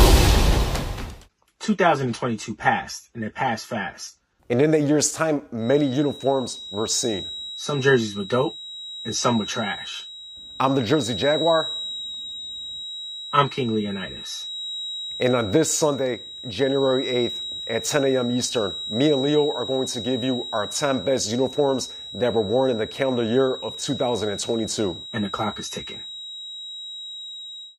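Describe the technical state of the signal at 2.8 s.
At 2.8 s the signal is intact, with no audible fault at that moment.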